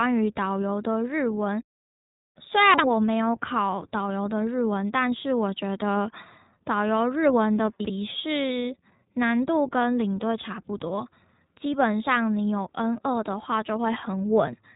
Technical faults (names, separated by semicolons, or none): iLBC codec; chunks out of order